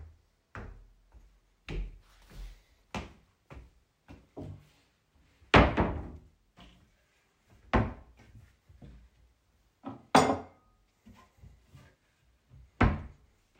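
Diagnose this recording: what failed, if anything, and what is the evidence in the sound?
Nothing failed here: the sounds in the recording come across without any dropout, click, distortion or other trace of trouble at any stage, so there's nothing to diagnose.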